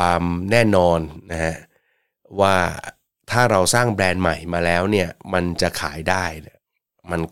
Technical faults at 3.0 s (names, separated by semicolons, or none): none